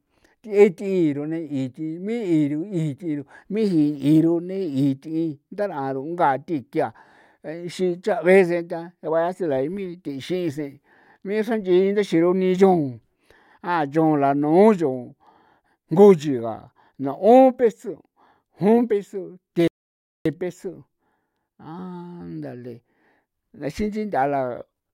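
At 19.68 s the speech stops abruptly in mid-flow. Silence holds until 20.26 s, a gap of 0.58 s. This is a playback stall. The player likely ran short of data or had its thread blocked. Then the sound resumes.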